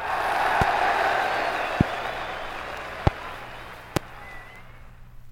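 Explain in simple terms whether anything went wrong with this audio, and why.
Four loud pops, at 0.62, 1.81, 3.07 and 3.97 s, sharp thumps over the sound, likely from brief electrical voltage spikes such as switching or static.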